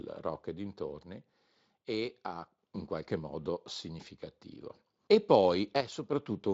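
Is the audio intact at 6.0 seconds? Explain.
No, one channel drops out from 5.81 to 6.13 s; the speech falls abruptly by about 6 dB, likely because one stereo channel vanished before the mono sum.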